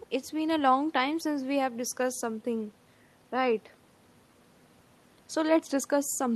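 No technical faults can be heard anywhere in this recording.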